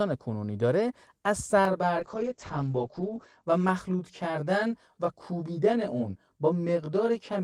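A speech recording with two overlapping faults. From 1.65 s to the end, channel delay (comb filtering) makes the sound rough and slightly doubled. One channel arrives roughly 20 ms late and the two are summed to mono, cancelling shared content at evenly spaced frequencies starting near 20 Hz. Between 2.01 s and 3.49 s, a call bitrate drop takes the encoder from 32 kbps to 9 kbps, holding the lowest rate for 1.28 s. Bandwidth narrows from 20 kHz to 8 kHz, so the audio turns muffled and coarse until the bitrate recovers.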